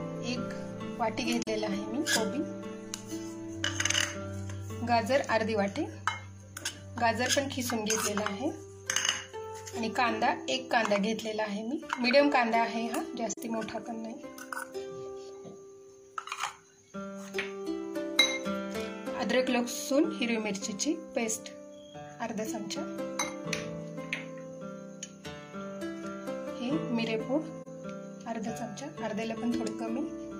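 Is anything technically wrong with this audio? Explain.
Yes, there's AAC frame loss with muting, three times: 1.42 to 1.48 s, 13.31 to 13.38 s, and 27.62 to 27.68 s. Each gap fits one lost AAC frame of about 43 ms, and the decoder zeroed out that frame's spectrum rather than guessing at it. Because AAC frames overlap, the sound fades down into a brief dip and fades back up, so each dropout is a short, soft-edged gap.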